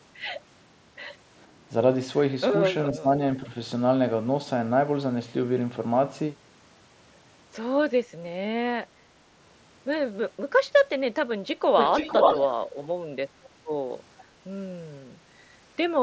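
At 2.93 s the speech starts dipping in and out until 3.2 s, dropping by as much as 15 dB or so, though only about a sixth of a second of it is actually pulled down. That's the pattern of speech suppressed in double talk. It's likely the far end was talking at the same moment, and the echo canceller couldn't separate this talker from its own loudspeaker echo, so it ducked everything.

From 11.77 to 12.66 s you get an echo leak, a copy of the speech trailing about 475 ms behind. It's surprisingly strong, actually a little louder than the direct speech, so it's hard to miss. The likely culprit is someone on a loudspeaker whose echo canceller let its mic pickup slip back into the call. It returns very briefly at 13.44 s with the same 475 ms delay, but there it's a tiny scrap buried around 30 dB down, barely audible.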